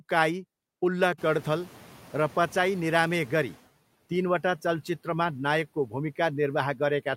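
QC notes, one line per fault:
1.18–3.62 s, noise suppressor catching up: when the room noise jumps by about 23 dB at around 1 s, the noise first pushes through only partly reduced, then sinks steadily over 2.44 s until it sits well under the talker just before "तिनवटा चलचित्रमा नायकको". The suppressor's noise estimate was tuned to the quieter background and trailed behind the sudden rise. Once its estimate caught up, it applied its full cut of about 10 dB.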